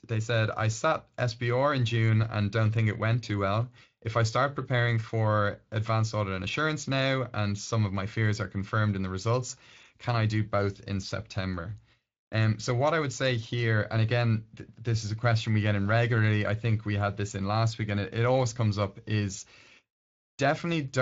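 The speech arrives intact through its Speex coding path, with no dropouts, distortion, level jumps or timing disturbances anywhere in the signal.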